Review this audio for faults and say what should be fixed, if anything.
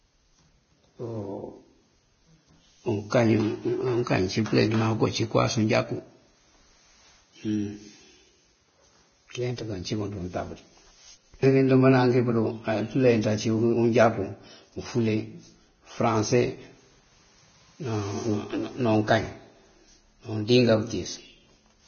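Hissy, grainy treble runs through the whole speech recording, consonants blur at their onsets, and nothing sounds above 6.6 kHz. This is likely Vorbis compression at heavy settings, consistent with roughly 18 kbps. Coarsely quantised upper bands turn fine detail into noise. Encode at a higher Vorbis quality setting to avoid this.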